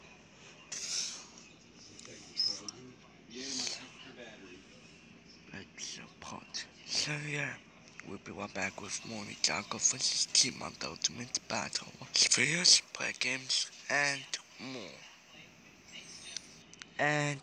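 From 8.62 s to 16.62 s the audio has pre-emphasis left on. The treble boost matches an FM 75 µs curve, and the matching de-emphasis cut was never applied, so 10 kHz sits about 13 dB above 1 kHz. The sound turns thin, bright and hissy, with sibilant edges. On a spectrogram the upper band brightens sharply across those eight seconds. The waveform shows spikier, denser high-frequency detail.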